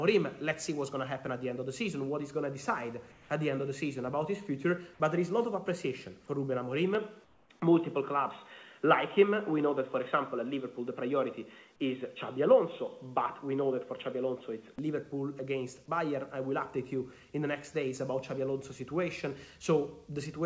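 Comfort noise in place of the background, 3.12 to 3.30 s: for about 180 ms the real background, which sits about 27 dB below the loudest passages, gives way to a smooth, featureless hiss about 3 dB quieter, and then the original ambience returns. This is likely discontinuous transmission: the sender's voice detector judged the moment silent and stopped sending, so the receiver filled the gap with synthetic noise shaped only roughly like the room.

Input switched to a poorer device, 6.95 to 14.79 s: the sound abruptly turns dull and boxy with no gap at the change. The top end, which elsewhere reaches about 8 kHz through the G.722 call path, now stops at 3.8 kHz. A new noise floor appears about 40 dB below the signal, while overall loudness stays much the same. The likely cause is the system changing its input mid-recording to a narrower-band microphone or a headset's call profile, then switching back.

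Comfort noise in place of the background, 7.24 to 7.50 s: inside that duller stretch, the background, here about 34 dB below the loud parts, is again replaced for about 260 ms by flat synthetic noise about 4 dB lower. The texture goes blank and steady before the real background resumes.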